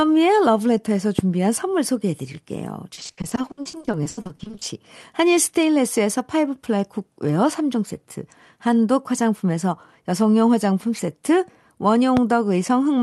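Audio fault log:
1.19–1.21 s and 12.17–12.19 s: loud pop. Each time a single sharp pop jumps out, roughly 15 dB above the speech. The speech carries on underneath. Each lasts about 24 ms. That fits a sudden voltage step, likely from a plug, switch, static or driver glitch, that the circuits downstream shaped into a brief pulse. The onset is abrupt, so it reads as a click-like thump, not part of the sound.
2.93–4.63 s: repeated packet loss (robotic sound). Over this stretch the speech keeps breaking into short holes. The longest lasts 80 ms, and the gaps add up to about 760 ms. Roughly 45 percent of the span is patched rather than real. Each hole is filled by stretching the last bit of sound, and the next one follows soon after. The speech turns choppy, with pieces missing.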